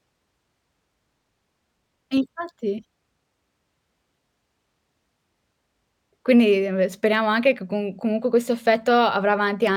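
Throughout the speech there is imaging from linear upsampling. The sound fits a rate raised from 22 kHz to 44.1 kHz by straight-line interpolation. The top end is dulled. A faint mirrored copy, around 40 dB down, fills 11 kHz to 22 kHz, adding a light metallic shimmer to sibilants.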